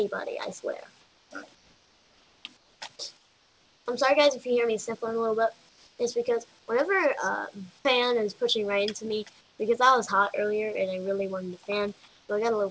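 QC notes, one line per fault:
1.01–1.31, 1.55–2.45, 2.57–2.81, 3.17–3.86, 5.69–5.99, 6.59–6.68, 9.41–9.59, 12.08–12.29 s: comfort noise in place of the background. In each pause the faint background, about 35 dB below the loud passages, turns into steady, featureless hiss roughly 3 to 5 dB quieter. It is likely discontinuous transmission with synthetic fill. Unlike a dropout or gating, it never falls to silence. Unlike noise suppression, it has no watery artefacts, and the noise continues to the top of the band, which ends at 8 kHz.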